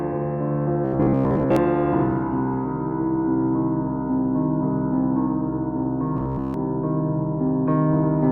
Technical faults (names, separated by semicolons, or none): robotic sound from repeated short buffers